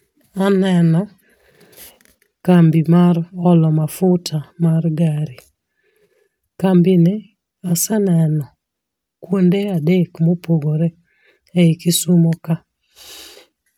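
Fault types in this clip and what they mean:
No fault types are present in this clip.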